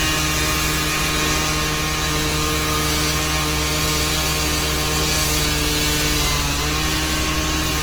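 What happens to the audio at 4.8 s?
At 4.8 s the sound carries the same damage heard across the whole clip: tonal parts turn rough, grainy and noisy rather than clean. The likely cause is Opus compression in its music (CELT) mode at a starved bit budget, roughly what a 16 kbps stream would give. Short of bits, the encoder keeps each band's energy but fills detail with folded copies of lower bands or noise. Bandwidth stays full, reaching about 20 kHz.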